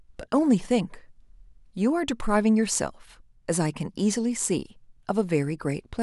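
No technical faults are audible.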